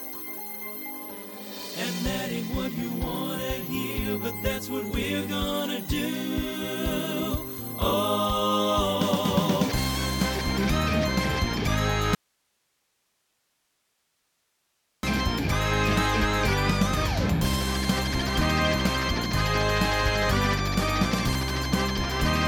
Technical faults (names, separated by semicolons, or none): audio dropout to a faint residue